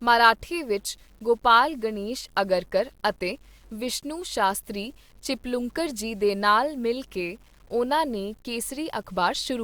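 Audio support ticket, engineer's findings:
Low bit depth without dither, throughout speech. Grainy distortion tracking the signal, quiet passages gritty, error around 35 dB below signal. Likely 9-bit rounding, no dither applied.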